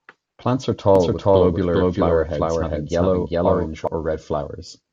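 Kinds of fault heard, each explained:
Doubled audio track: From about 0.95 s to 3.87 s the speech is heard twice, a second full-band copy trailing roughly 400 ms behind at about the same loudness as the original, so every syllable lands again as a distinct, dry repeat with no fading tail or room sound. The copy cuts in and out abruptly at those edges. The likely cause is the same signal being captured a second time through a slower path, or an edit leaving two copies out of step.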